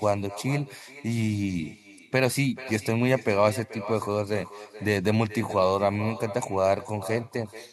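Throughout, echo with no canceller returns speech from a far-end loudspeaker roughly 0.4 s later, about 16 dB quieter: a distinct copy, not reverberant smearing.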